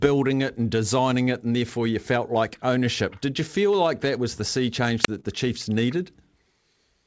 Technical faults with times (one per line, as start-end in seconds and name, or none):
5.03-5.08 wireless microphone squelch dropout
5.20-5.26 short concealed packet loss